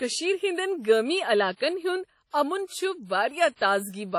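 From start to finish, the speech has most likely been through WMA compression at a low bitrate, with damage heavy enough to fit an encode of around 32 kbps. The transform coder spent too few bits, zeroing weaker spectral lines and smearing quantisation noise across long blocks, and nothing survives above 16.5 kHz. The result is a ringing, washy quality around each sound, with a hiss that swells and fades along with the signal rather than sitting steady underneath it.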